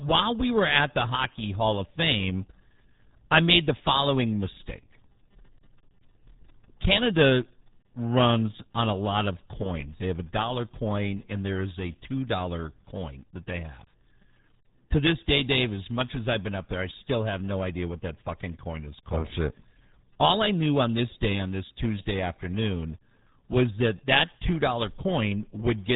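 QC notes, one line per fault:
Throughout: RealAudio 14.4 codec. The speech is cut off sharply above 3.8 kHz and heavily damaged, sounding muffled and gargly, because a very low-rate speech coder rebuilds the voice from a coarse model. The thinness fits a stream of around 8 kbit/s.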